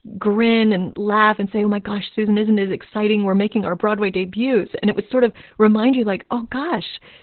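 Opus voice compression runs through the whole speech clip. Nothing remains above 4.2 kHz, so the band is narrow and the speech sounds muffled. The SILK coder renders the excitation coarsely, which fits a bitrate near 8 kbps. The damage is heavy. Speech turns hoarse and slightly robotic.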